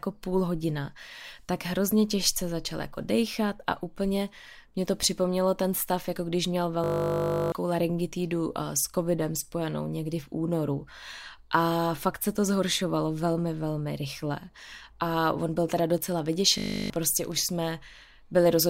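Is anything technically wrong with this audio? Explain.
Yes, the speech has two kinds of fault.

System hang loop: twice the computer or driver stalled while the audio hardware kept replaying one 20 ms stretch of its buffer. From 6.84 to 7.52 s, after "stav jako když měl", that slice repeats 34 times. From 16.58 to 16.9 s it repeats 16 times. Each time the 50 Hz loop becomes a steady buzz, and roughly 0.7 s and 0.3 s of speech are lost.

Train of clicks: from 15.98 to 17.47 s, after "on byl teda", about twenty similar clicks arrive at a regular 14.2 per second. The likely cause is interference from nearby equipment or a faulty connection or power supply. The clicks tick over the speech at roughly the same level as the speech itself.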